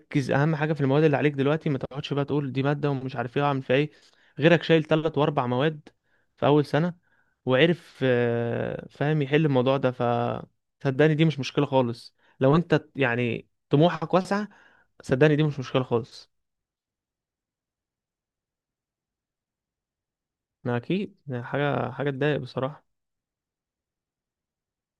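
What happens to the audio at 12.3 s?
Nothing goes wrong at 12.3 s; the speech runs through that moment intact, with no dropout, click or distortion.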